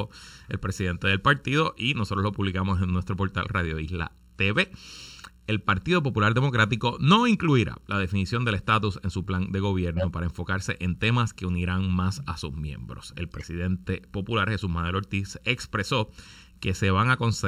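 Throughout the speech, one channel lags the other by a little under a millisecond before the two are combined to mono. This produces channel delay (comb filtering): sound common to both channels cancels at regularly spaced frequencies, with the first deep notch around 700 Hz and further notches repeating roughly every 1.4 kHz above it. The result is a fixed hollow, phasey colouration that stays the same whatever is being said.

From 9.97 to 10.05 s there is a corrupt frame decoded fault. The decoder played damaged compressed data as if it were valid, so energy lands at wrong frequencies and is heard as a short glitch peaking at about -15 dBFS. Its length suggests a couple of consecutive frames were hit. A second, quieter instance occurs from 13.32 to 13.43 s, peaking at about -25 dBFS and again spanning roughly two frames.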